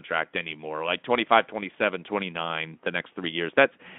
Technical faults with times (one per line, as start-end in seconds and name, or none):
none